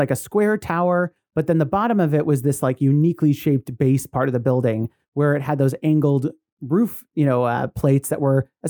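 A short speech recording, with no technical fault to be heard anywhere in it. The signal runs without any dropouts, distortion, glitches or level problems.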